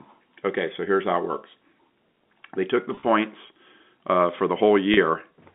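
Speech over a narrowband telephone line, with the G.711 coding audible only as the usual band of about 200 Hz to 3.7 kHz. Packet loss with pitch repetition strikes twice: from 2.95 to 3.03 s, after "took the", about 50 ms is lost in scattered gaps over 80 ms, the longest 30 ms, which fits several lost packets; and at 4.94 to 4.97 s, after "uh for the", a 30 ms run. The receiver fills each gap by replaying the last pitch period, so the voice briefly holds on a buzzy, static tone before resuming.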